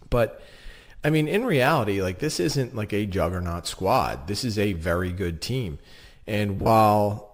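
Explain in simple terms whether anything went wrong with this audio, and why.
Near the end of the speech, from about 6.58 to 6.69 s, the sound briefly turns into a rough, hissy smear instead of clear speech. This is lost LE Audio frames: small chunks of the Bluetooth signal never arrived, about 70 ms in total, scattered over roughly a tenth of a second, with the longest gap around 40 ms. The receiver filled each hole by reusing the last bit of sound with its detail scrambled, which causes that smeared, noisy patch.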